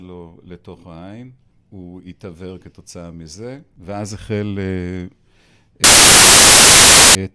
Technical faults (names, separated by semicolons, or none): file tags played as audio